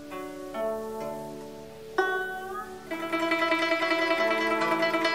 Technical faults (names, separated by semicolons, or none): stuck bit